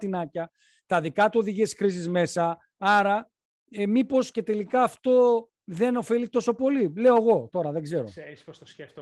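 The signal carries no technical faults; it has passed through Opus voice compression at 24 kbps in hybrid mode with the full band kept, and the coding leaves only a light imprint on the sound.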